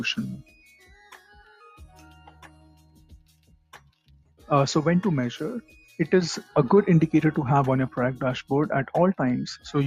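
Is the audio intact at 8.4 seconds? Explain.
No, not really. At 8.4 seconds, as across the whole clip, a noise suppressor meant for speech is working on music or other sounds. It treats sustained tones and tails as noise, so levels pump by around 10 dB and held parts thin out.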